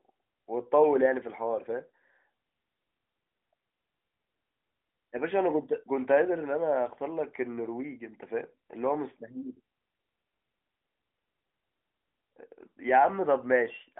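No technical fault can be heard: the speech sits in the telephone band of roughly 250 Hz to 3.5 kHz, with nothing above about 3.7 kHz, and the AMR narrowband mobile codec leaves only a light coding texture, consistent with its highest-quality 12.2 kbps mode.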